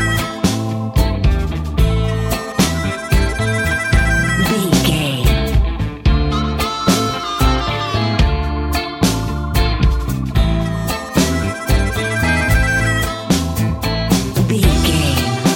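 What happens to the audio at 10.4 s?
Nothing goes wrong at 10.4 s; the audio plays through that moment intact, with no dropout, click or distortion.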